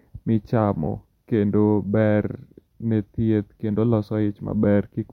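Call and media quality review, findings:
No faults found in the speech recording. Nothing to attribute to any component in the call or media path.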